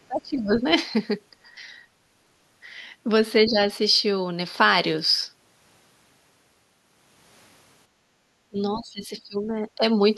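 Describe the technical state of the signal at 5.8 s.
At 5.8 s the speech signal is intact, with no dropout, click, distortion or other fault present at that point.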